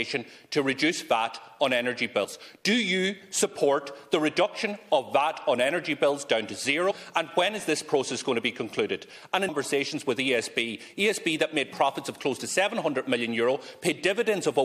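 Short glitches break through at 2.23 to 2.25 s, 6.90 to 6.92 s and 9.48 to 9.50 s, each about 20 ms. These are damaged data in a compressed stream: corrupted bytes make the decoder misread frames and lose sync until it finds the next valid frame header.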